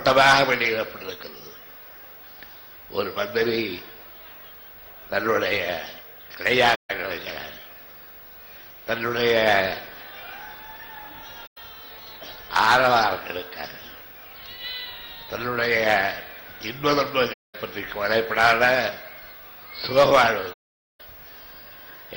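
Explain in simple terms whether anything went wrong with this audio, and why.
AAC frame loss with muting happens four times: at 6.75 to 6.90 s, 11.46 to 11.58 s, 17.33 to 17.55 s, and 20.53 to 21.01 s, the longest at nearly half a second. Chunks of the compressed audio went missing, and the decoder filled each gap with silence. Because neighbouring chunks overlap and blend, the sound fades out and back in around each hole, so you hear brief soft-edged dropouts.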